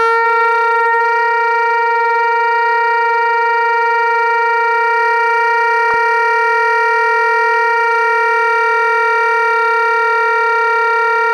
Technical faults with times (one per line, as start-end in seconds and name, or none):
5.90-5.94 DAB burbling
7.51-7.66 DAB burbling